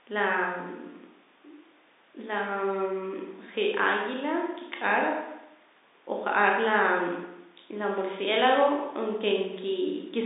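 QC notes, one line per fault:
No faults heard in this telephone-band speech.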